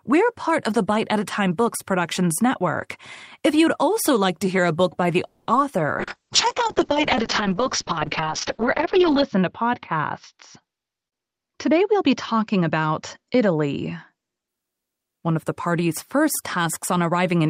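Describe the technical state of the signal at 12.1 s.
At 12.1 s two faults overlap. A call bitrate drop runs from 6.0 to 14.54 s. The encoder's rate fell from 32 to 6 kbps and its bandwidth shrank from 20 to 8 kHz, so the sound is coarse, watery and muffled. Unlike a simple low-pass filter, the graininess shows the coding itself got coarser, with the lowest rate holding for about 3.25 s. A jitter buffer speed-up also spans 10.76 to 12.62 s. The receiver trimmed short pitch-period slices to drain excess buffered audio, playing at 110% speed and removing about a fifth of a second in total. Pitch stays unchanged, which separates it from a sample-rate error. It sounds hurried rather than higher-pitched.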